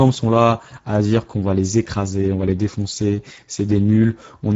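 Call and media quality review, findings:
Hoarse, noisy speech throughout; nothing above 7.7 kHz, upper band sounds like shaped noise. Speex codec at a low setting, consistent with a bitrate near 10 kbps: too few bits for the CELP excitation, so voicing detail is lost.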